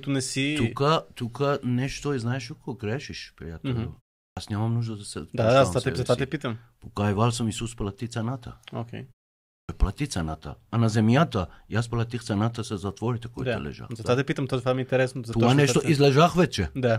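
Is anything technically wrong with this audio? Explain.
Yes, two kinds of fault are audible in this speech. A clipped start after a pause occurs at 4.30 s and 9.61 s, after silences of 0.37 s and 0.56 s, losing about 67 ms and 78 ms. The output device dozes during the gap and is still waking when speech resumes, so the first sounds vanish and the speech begins abruptly. Unlike muted pauses, which fade out and return without losing speech, this cuts into the speech itself.

At 16.04 s there is a single sharp click, most likely from dropped samples. A fraction of a millisecond is missing, so the waveform jumps straight to a later value. No sound is audibly lost, which is what separates it from a clipped start.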